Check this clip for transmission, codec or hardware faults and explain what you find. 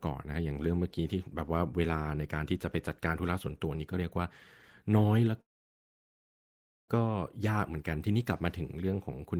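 There's one fault, a call audio freeze from 5.41 to 6.90 s. The sound trails off, then goes quiet for about 1.44 s before the speech resumes exactly where it stopped, nothing lost. Likely delayed packets let the jitter buffer run dry.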